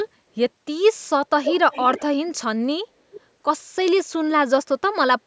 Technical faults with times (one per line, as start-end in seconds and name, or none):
1.44-2.03 echo leak
3.11-3.21 echo leak